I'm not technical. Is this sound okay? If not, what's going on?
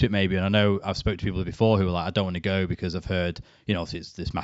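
Yes, this sound is okay, and nothing is going wrong in it.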